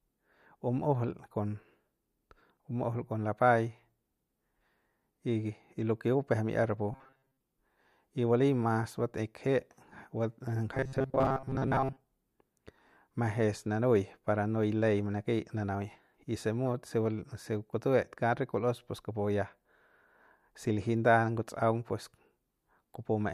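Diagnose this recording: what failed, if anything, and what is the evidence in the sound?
The driver or buffer stage likely starved of fresh input, so playback filled each gap by looping the last few milliseconds it held instead of the missing audio. From 6.92 to 7.40 s, and again from 10.75 to 12.07 s, the speech collapses into a rigid, metallic buzz locked at 133 Hz, with most of the real signal skipped. That steady pitch fits a chunk about 7.5 ms long being replayed: robotic sound from repeated short buffers.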